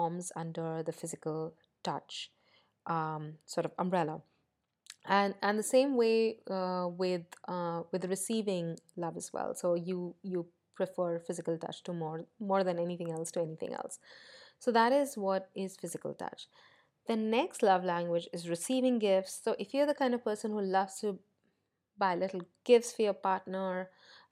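Nothing stood out as a technical fault on listening to the speech in this recording.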